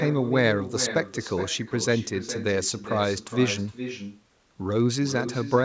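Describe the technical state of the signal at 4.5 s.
At 4.5 s the speech carries an echo with no canceller, present throughout: the far end's loudspeaker feeds its microphone, returning a thinner copy roughly 0.4 s later at about -10 dB, seen as a faint, delayed duplicate of each waveform burst and spectrogram pattern.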